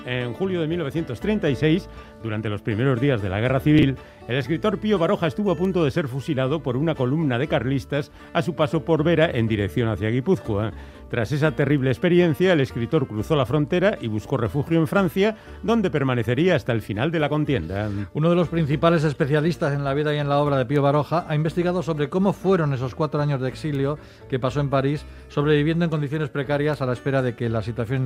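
A brief garbled, jumbled moment appears from 3.79 to 3.83 s, where a few hundredths of a second of sound seem shuffled. These are chunks out of order. A chunk about 10.67 ms long arrived or was written three chunks late, so it plays after material that should follow it. Nothing goes missing, but the reordering leaves three hard joins.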